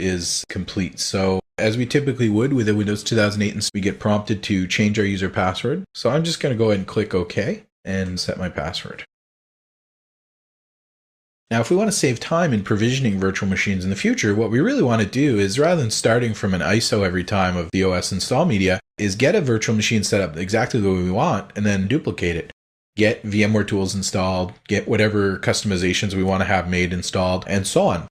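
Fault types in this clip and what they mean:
Skip ahead: around 3.7 s the audio lurches forward with no gap, roughly 0.4 s of material just gone, dropped while later audio was already queued, so the two sides butt straight together and the listener loses a chunk mid-flow.
Jitter buffer speed-up: from about 4.07 to 6.74 s the receiver trims tiny pitch-period slices over and over to shed about 0.2 s of excess buffered delay, so the sound runs at 108% speed with pitch unchanged and comes across noticeably hurried.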